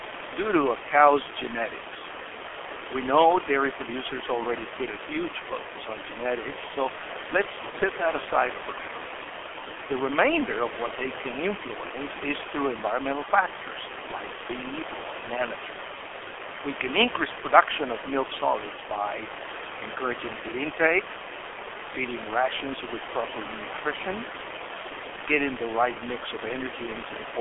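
Throughout the recording, the speech passes through the G.723.1 codec, whose low rate, consistent with about 6.3 kbit/s, and slow 30 ms frame updates leave the voice muffled and hoarse with smeared consonants, in a band of roughly 300 Hz–3.4 kHz; the room noise, about 12 dB below the speech, sits underneath.

From 7.70 to 7.75 s, VoIP packet loss concealed by the speech codec appears: data went missing and the decoder extrapolated its last pitch and filter, which fits a single lost 30 ms frame, so the sound briefly stretches and fades before the voice recovers.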